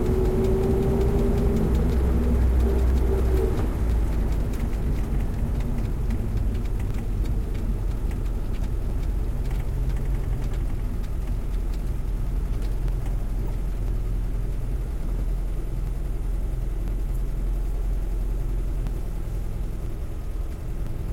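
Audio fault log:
0.90 to 20.87 s, periodic USB or driver dropouts: regular ticks heard every 1.00 s across the sound, about twenty in all, each where a couple of milliseconds of audio is skipped outright, likely because a background task stalls the USB bus or audio driver at a fixed interval.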